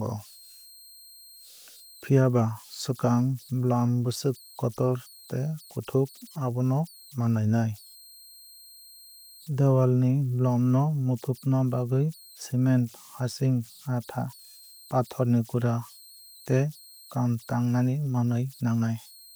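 Converter idle tones run through the whole recording: an undithered delta-sigma converter settles into repeating bit patterns on the quiet parts of the speech, leaving a whistle around 4 kHz in the pauses and grainy noise under soft passages, about 28 dB below the signal.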